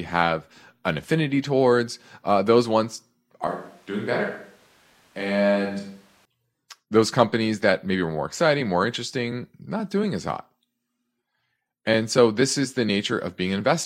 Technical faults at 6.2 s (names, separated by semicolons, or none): switch to a distant microphone